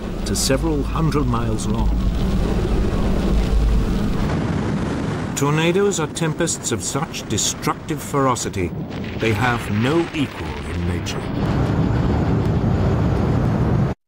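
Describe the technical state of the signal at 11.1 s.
At 11.1 s the signal sits inside a run of periodic USB or driver dropouts. The run lasts from 8.46 s to 13.45 s. Something blocks the audio path once every second. Each time, a couple of milliseconds of audio vanish and are replaced by silence. That makes around seven short gaps in all. Each one is heard as a small tick or pop, evenly spaced, and audible only while sound is playing.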